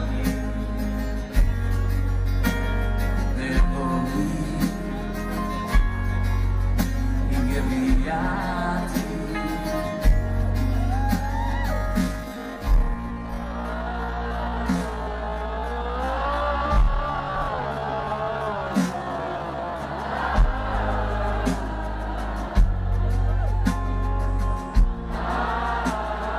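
From 11.70 s to 19.80 s the audio turns into a time-stretched section. The pace drops abruptly to about 0.54 times normal speed, yet the pitch does not fall with it. The likely cause is software lengthening this passage to fill a set duration, repeating short slices to hold the pitch steady. The slowed passage drags. Normal pace returns at 19.80 s.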